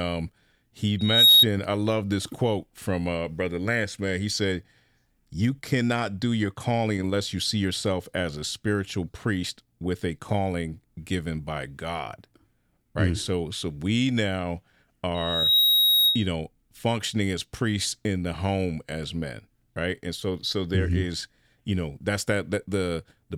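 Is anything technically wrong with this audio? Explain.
Yes, loudspeaker feedback squeal occurs twice, at 0.99–1.46 s and 15.15–16.28 s. The microphone re-amplifies its own loudspeaker output at 3.8 kHz. Each time, a pure tone swells within roughly half a second to well above the speech. On a spectrogram it appears as a bright horizontal line at 3.8 kHz.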